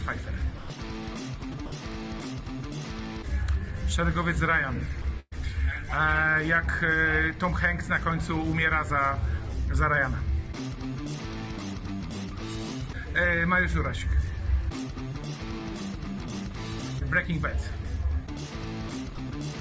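Brief stretches of the sound give way to steady comfort noise at 0.58 to 0.70 s, 1.52 s, 1.66 to 1.72 s, 5.02 s and 19.15 s, most likely sound dropped by the voice detector misjudging quiet passages as background. At 5.20 to 5.33 s, the sound smears into a held, fading continuation and then briefly goes silent before resuming further on. This is a burst of packet loss, with about 120 ms of audio missing. Nothing above 8 kHz comes through, which fits a G.722 call path at 64 kbps.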